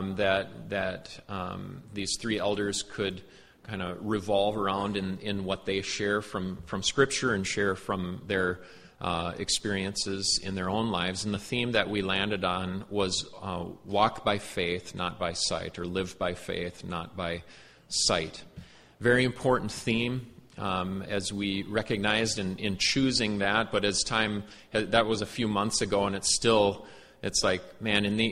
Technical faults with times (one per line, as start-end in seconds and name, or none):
none